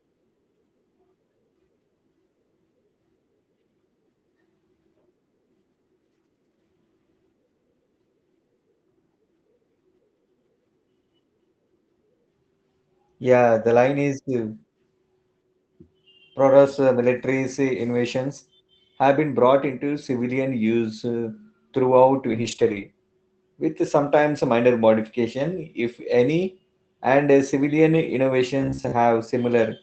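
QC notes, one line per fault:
22.31–22.85 s, lost packet rebuilt from error correction, after "civilian use uh throughout": about 280 ms replayed from low-bitrate backup copies, so there is no gap but the sound turns rougher and noisier.
28.62–28.94 s, robotic sound from repeated short buffers: a rigid metallic buzz near 66.7 Hz, likely from a 15 ms buffer repeated, with roughly half the real audio skipped.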